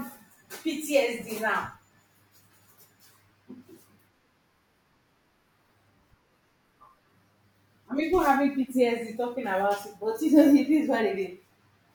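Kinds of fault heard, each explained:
No kinds of fault heard in this speech recording.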